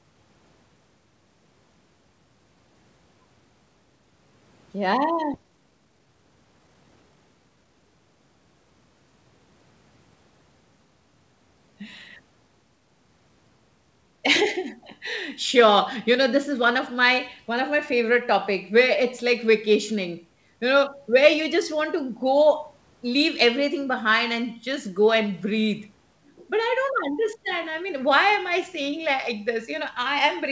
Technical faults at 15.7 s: none

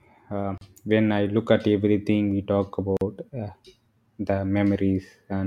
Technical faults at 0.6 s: gap at a join of encoded pieces

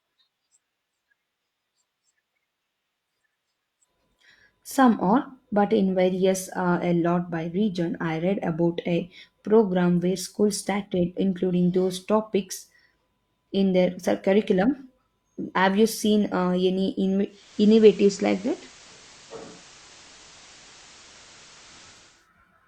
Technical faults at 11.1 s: none

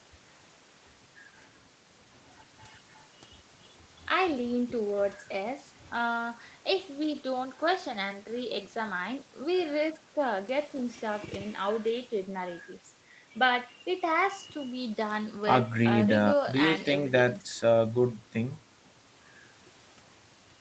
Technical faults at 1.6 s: none

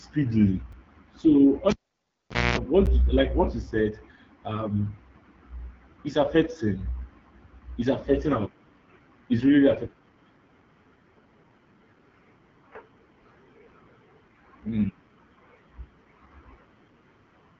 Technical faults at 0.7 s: AMR wideband (HD Voice) codec; block of digital silence

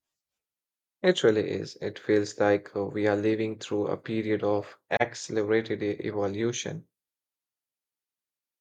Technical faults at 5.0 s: AAC frame loss with muting

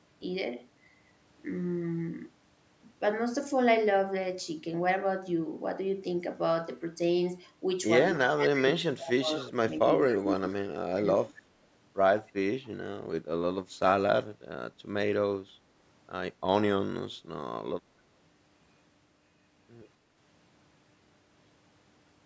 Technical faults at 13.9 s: none

